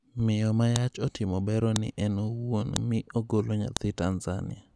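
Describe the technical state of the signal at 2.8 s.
Right around 2.76 s there's a file header played as audio: a sharp, loud snap just before "mi ogolo". A joined piece kept its header, and those few dozen bytes come out as raw samples. It fits pieces of about 1 s being spliced together.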